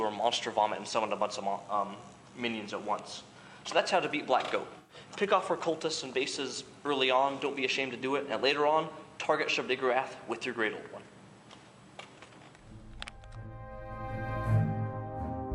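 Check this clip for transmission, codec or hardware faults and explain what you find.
One transmission fault is present. From 4.78 to 4.95 s, AAC frame loss with concealment: the decoder rebuilt roughly 107 ms of missing frames from the last good spectrum, producing a brief smeared, noisy patch.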